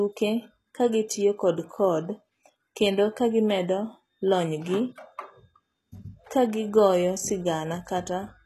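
From start to finish the speech carries plainly audible codec damage, most likely HE-AAC compression at a rate that fits around 16 kbps. The treble is bright yet synthetic: s sounds come out gritty, lispy and metallic, because the upper band is rebuilt from copied lower bands rather than coded. On a spectrogram the top shows smeared, patchy blocks that repeat lower structure, with harmonics misaligned across the crossover and nothing at all above 12.3 kHz.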